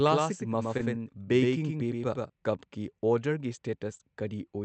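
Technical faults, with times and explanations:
0.00–2.30 s, doubled audio track: The speech is already doubled when the clip begins. A second full-band copy runs about 100 ms behind, roughly 5 dB quieter. It has no decay and no added room sound, so it reads as a hard slapback rather than an echo. At 2.30 s the copy stops abruptly. A second capture path or an edit holding two out-of-step copies is the likely cause.
0.77–0.81 s and 3.97–4.01 s, short concealed packet loss: Each gap matches a missing stretch of about 20 ms, which fits one lost packet on the Opus call path. The receiver filled it by extending the preceding sound, for 15 ms the first time and 24 ms the second. It then blended back into the real audio. The result is a brief smear or wobble, and a short consonant can be lost inside it.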